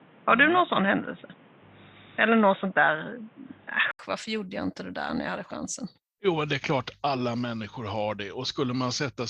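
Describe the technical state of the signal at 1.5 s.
At 1.5 s the signal is inside a stretch, from 0.0 to 3.99 s, that sounds like an input switched to a poorer device. The likely cause is the recording running through a narrower-band microphone or a headset's call profile. Nothing is present above 3.8 kHz, so the speech sounds dull and boxy, with a noise floor around 30 dB below the signal. At 3.99 s a short silence of 80 ms precedes a level shift of roughly 5 dB.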